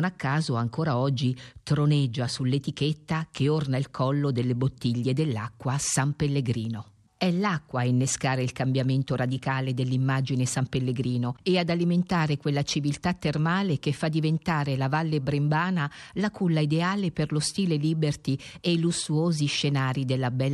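Nothing in the speech recording points to a technical fault.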